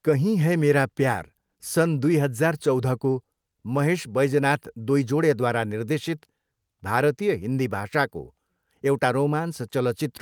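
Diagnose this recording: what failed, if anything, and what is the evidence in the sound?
Nothing failed here; listening closely, there's no stage in the chain that shows any trouble in the sound.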